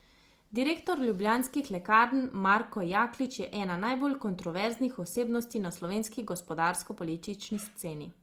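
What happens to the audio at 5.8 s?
At 5.8 s the speech carries the same damage heard across the whole clip. The tones sound rough, grainy and noisy, and the degradation is plainly audible. This is likely Opus compression in its music (CELT) mode. The damage fits a low bitrate of about 24 kbps, with the full bandwidth kept. With too few bits, the encoder holds each band's energy but fills the detail with noise or folded copies of lower bands. That replaces clean tone with grit.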